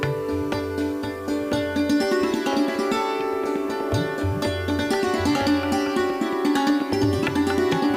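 From start to end the audio carries low bit depth with dither. It was reduced to 8 bits, with random dither added before rounding, so the rounding error became steady white noise instead of distortion. That is heard as a constant, even hiss roughly 30 dB below the signal. On a spectrogram it shows as a flat, uniform noise floor across all frequencies, and on the waveform as a steady fuzzy band around zero in the quiet stretches.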